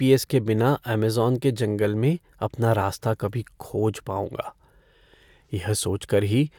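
Listening to this speech recording, nothing stood out as a technical problem.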